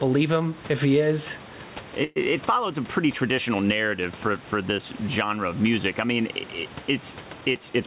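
Gain pumping runs through the whole clip. The room noise sits about 28 dB below the speech, and the gain swings by around 10 dB. This is likely an input gain set far too high, with a fast limiter or compressor clamping down whenever the speech peaks and releasing in the gaps. The result is squashed dynamics.

From 2.04 to 2.18 s there is a call audio freeze. For about 118 ms the sound does not stop. Instead, the last fragment is stretched into a decaying buzz or hiss, with no silent stretch. The likely cause is delayed packets draining the receiver's jitter buffer, so the receiver kept extrapolating until data arrived. Speech then resumes where it left off, with nothing lost, but the clip now carries an extra 118 ms of delay.

From 7.41 to 7.85 s the receiver applies a jitter buffer speed-up. The speech runs at about 108% of normal rate while the pitch stays the same, so it sounds slightly hurried. 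Roughly 40 ms of audio is cut out in many tiny slices, each one or a few pitch periods long, which lets the receiver shrink an overfull buffer back toward its target delay. Throughout, nothing is present above 4 kHz, which fits a narrowband call codec such as G.711.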